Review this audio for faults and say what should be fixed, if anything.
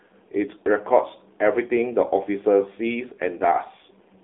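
AMR narrowband mobile codec damage, present throughout the whole clip: the speech has been squeezed through an 8 kHz mobile voice coder that rebuilds it from a vocal-tract model excited by a sparse set of pulses, so the band sits roughly between 250 Hz and 3.6 kHz with nothing above. The coding damage is plainly audible as a buzzy, synthetic edge on the voice, which fits a low mode around 7.4 kbps. Prevent it by capturing or routing the call over a wideband or full-band path instead of a narrowband AMR-NB link.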